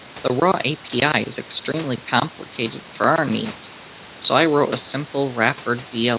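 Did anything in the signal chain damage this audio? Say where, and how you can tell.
No, nothing in the chain damaged this speech: the room noise sits about 21 dB below the voice, and the band stopping at 4 kHz is just what you'd expect from a narrowband call path, which fits G.711 mu-law at 64 kbps.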